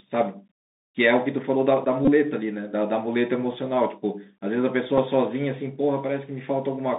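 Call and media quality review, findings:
Narrowband, muffled speech with scratchy s sounds and a granular hiss underneath, throughout. Bluetooth CVSD headset codec: passband roughly 200 Hz to 3.7 kHz, consistent with 64 kbit/s CVSD. Its one-bit delta steps can't keep up with loud high content, causing slope-overload distortion and hiss.

Short buzzy stutter at 2.05 to 2.09 s and a brief tick at 4.98 s. Bluetooth headset packet repeated: lost link packets were replaced by the previous packet's decoded bits. The first repeat run fits about six 3.75 ms packets and buzzes near 267 Hz. The second fits roughly two.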